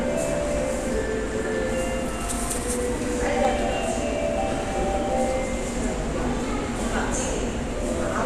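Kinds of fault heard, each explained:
Dropped samples: There are two sharp, isolated clicks, one at about 1.28 s and another at 3.45 s, each showing as a thin vertical line running up the spectrum. The likely cause is a tiny chunk of the stream going missing, only a fraction of a millisecond, so the waveform jumps straight from one value to a later one. That step is far too brief to remove any audible sound, so all you hear is the click itself.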